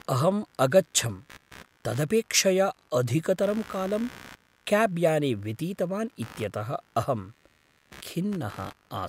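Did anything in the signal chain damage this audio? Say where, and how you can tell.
Yes: computer activity noise runs throughout the speech, a buzzing pulse train near 70 per second, roughly 25 dB below it. Computer load shifts the shared analogue ground, injecting it.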